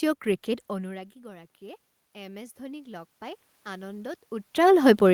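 Automatic gain rising from 0.69 to 4.2 s: after the talker moves away around half a second in, the input drops about 20 dB, and the control slowly adds about 8 dB, lifting voice and room noise together.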